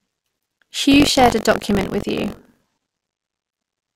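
From 0.90 s to the end, the speech takes on a robotic rattle buzzing at 46.9 Hz, present only while sound is playing. This is buffer tearing. The program filling the playback ring buffer and the hardware reading it have drifted until they cross inside every period, a rate that fits a 1024-sample buffer. In each period, a small slice, under a tenth, is stale audio roughly 40 ms old, hard-joined on both sides.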